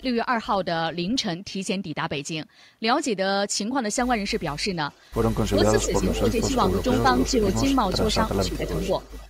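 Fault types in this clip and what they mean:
Echo leak: the far end's echo canceller, likely on a loudspeaker phone, let part of its microphone pickup through, so a copy of the speech comes back about 425 ms late, faint near 4.9 s, then only about 10 dB below the speech from 5.8 to 8.0 s and 8.45 to 9.25 s.
Speech suppressed in double talk: with both sides talking, the echo canceller likely could not separate the talker from the returning echo and turned both down, so the speech dips by a few dB, at most about 10 dB, in short patches between 5.5 and 8.7 s.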